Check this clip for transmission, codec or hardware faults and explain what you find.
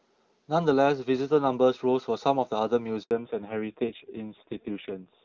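Two faults appear in this speech clip: a handover gap at about 3.03 s, then a fallback to narrowband.

Handover gap: From 3.03 to 3.11 s, the sound drops out for 80 ms. The call was being moved to another network, and no speech frames arrived during the switch. The sound fades within a few tens of milliseconds. What was said in that span is lost.

Fallback to narrowband: From 3.11 s to the end, nothing remains above 4 kHz. Before the gap the call carried clear HD Voice, consistent with AMR-WB near 23.85 kbit/s. After it, the audio points to AMR-NB at about 5.9 kbit/s. The speech turns dull, muffled and rough.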